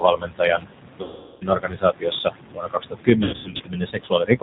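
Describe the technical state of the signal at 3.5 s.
At 3.5 s the sound falls inside a stretch of VoIP packet loss concealed by the speech codec, running from 3.24 to 3.63 s. About 240 ms of audio is missing, scattered over 360 ms in runs of up to 90 ms, which points to roughly eight lost packets. The decoder fills each gap by repeating its last pitch and filter at falling gain, so the sound is stretched and fades, then stays weak briefly after packets return. Unlike a plain dropout, the gaps are filled with extrapolated sound rather than silence.

The same moment lies within speech cut by the noise suppressor, from 0.57 s to the end, touching around two seconds in all with drops of up to about 22 dB. Soft consonants and word endings sink with the background and sound swallowed. A packet gap sounds stretched and fading, while these cuts just sound faint.

Noise suppressor artifacts run throughout. 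The suppressor pulls the background down by about 20 dB frame by frame, so the room noise, sitting about 11 dB below the speech, dips between words and rises under them. That steady pumping differs from the codec's roughness.

The G.729 codec also runs throughout, at 8 kbit/s with its damage plainly audible. Speech is rebuilt from a vocal tract filter, a pitch predictor and a few pulses per frame, with nothing above 4 kHz. The result is dull, slightly rough and synthetic. It is present everywhere in the clip, not only at the packet gaps.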